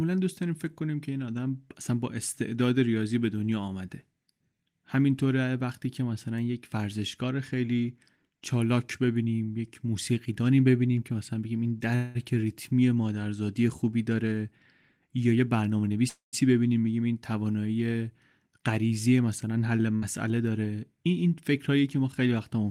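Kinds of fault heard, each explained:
Call audio freeze: the speech stops and the last sound is stretched into a fading buzz or hiss for about 0.2 s at 11.95 s and about 0.24 s at 16.09 s, the second dropping into silence. Likely the jitter buffer ran dry. Unlike packet loss, nothing is skipped and the speech resumes exactly where it halted.
Jitter buffer speed-up: from 14.97 to 15.98 s the speech runs about 16% fast, and from 18.48 to 19.07 s about 9% fast, trimming roughly 150 ms and 70 ms. Short pitch-period pieces are cut repeatedly to shrink the delay, so the pace hurries while the pitch stays unchanged.
Burst of packet loss: at 19.96 s a gap of about 60 ms of speech is lost. The receiver bridges it with a brief decaying continuation of the preceding sound, then jumps ahead. Unlike a freeze, the part in between is gone rather than delayed.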